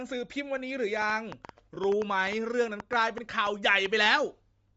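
Bluetooth LC3 compression runs through the whole of this speech recording, giving it a breathy, grainy edge. The likely cause is LE Audio's transform codec at a low rate, which fits roughly 32 kbps with 10 ms frames: much of the upper spectrum is discarded and refilled with noise. A train of clicks runs from 1.02 to 4.07 s, about 15 near-identical pops at an uneven pace of roughly five per second, peaking around 10 dB above the speech and audible in pauses too, likely from electrical interference or a faulty connection. Lost LE Audio frames show up at 1.75 s, consistent with a single dropped 10 ms frame, where the decoder reused the previous spectrum with randomised signs to cover the gap.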